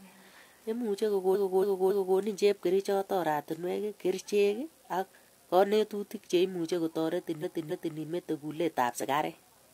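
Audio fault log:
1.30–2.14 s and 7.39–7.94 s, repeated frames: the same 0.28 s stretch of sound plays over again, three extra times in the first run and twice in the second, which fits a block of about six compressed frames being written more than once. Each repeat is identical, heard as a stutter. The first run adds about 0.84 s to the clip and the second about 0.56 s. Unlike a dropout or skip, nothing is missing.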